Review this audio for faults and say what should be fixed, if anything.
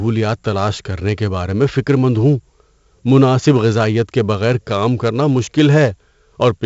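4-bit ADPCM compression runs through the whole speech clip. Each sample is stored as a coarse 4-bit step from a predicted value, so a gritty hiss rides on every loud syllable and rises and falls with the level, and sharp onsets distort where the step size cannot grow quickly enough. The damage is heavy. Nothing is present above 7.7 kHz, which points to roughly a 16 kHz sample rate and fits a 64 kbps stream, so the top end is dull as well. To prevent it, keep the speech in a linear PCM or modern wideband codec at a higher sample rate rather than 4-bit ADPCM.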